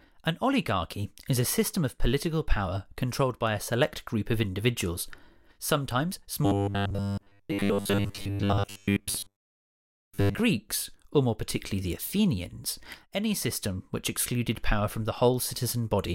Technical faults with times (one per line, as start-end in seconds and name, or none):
6.46-10.40 robotic sound from repeated short buffers